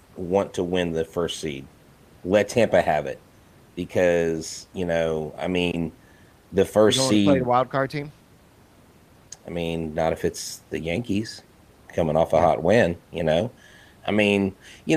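No technical faults can be heard in this recording.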